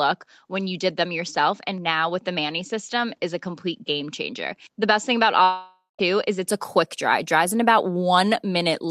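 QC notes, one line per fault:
0.00 to 6.49 s, input switched to a poorer device: The sound is dull and boxy, with nothing above 7.6 kHz and a level a few dB lower. A faint new noise floor sits underneath. It clears up without a gap just before "a quick dry". The likely cause is a change to a narrower-band microphone or headset.
5.43 to 6.01 s, long network dropout: About 0.56 s of audio is missing. The last sound is stretched into a fading buzz, followed by about 0.15 s of silence. The audio then resumes further on, with the lost part gone. This likely comes from packets that never arrived.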